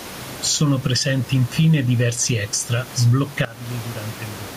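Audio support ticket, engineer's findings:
Gain pumping, throughout. Input gain set far too high, with a fast limiter or compressor likely clamping each loud syllable. Level swings around 10 dB; room noise sits about 28 dB below speech. Loud and soft passages squeezed together; speech sounds flattened.

Sudden gain jump, 3.45 s to end, right after "presenti infine diversi extra". Digital gain stepped down between adjacent samples with no ramp, likely a setting change or bit shift applied instantly. Speech and background drop together by about 18 dB in one step. Abrupt loss of level, with the rest of the clip noticeably quieter.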